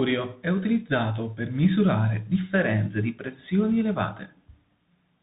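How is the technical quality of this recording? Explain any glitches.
Not great. There's tandem speech coding all the way through. It sounds like the speech went CVSD, then G.711 mu-law, then CVSD again, with each stage re-coding the last one's damage. That leaves it rough and noisy, with nothing above 3.8 kHz.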